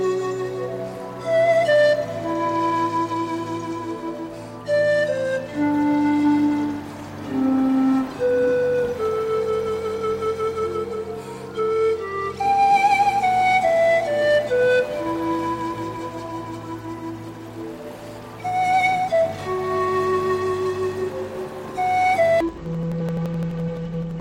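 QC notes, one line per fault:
22.40–24.21 s interleaved audio read as planar: octave-low, doubled, choppy, each 85 ms block's halves played together; spectrogram shows halved harmonics, vertical seams at 11.7 Hz.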